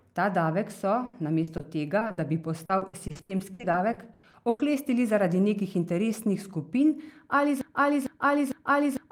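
This speech clip has repeated packet loss (robotic sound) from 1.05 to 4.61 s: 23 gaps, the longest 100 ms, patched by repeating prior sound, so a spectrogram shows smeared, repeated frames. From 7.61 s to the end, a broken-record loop repeats a 450 ms fragment back to back, likely a stalled player or stream, visible as identical tiled waveform blocks.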